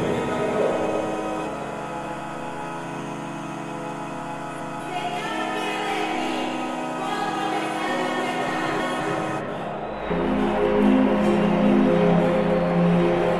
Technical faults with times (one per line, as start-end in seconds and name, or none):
4.20-4.80 chunks out of order
8.20-9.00 chunks out of order